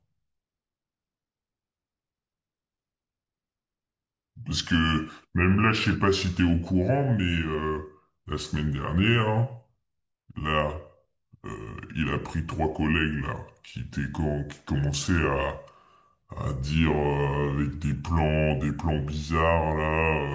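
Speech runs slow and deep from start to finish, a clear case of wrong sample rate. Everything plays at about 0.73 times normal speed and sits about 5.5 semitones low, which fits audio captured near 22 kHz being played back at 16 kHz with no conversion. Unlike a pitch shift or a time stretch, which alter only one dimension, speed and pitch drop here by exactly the same ratio.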